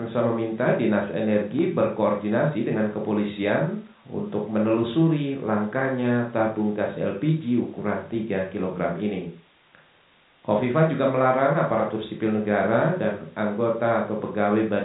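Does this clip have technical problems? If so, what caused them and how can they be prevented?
No, there are no technical problems to point to in this speech clip. What can be heard of its G.711 telephone coding is the expected band limit at 4 kHz and a faint quantisation noise that follows the signal level.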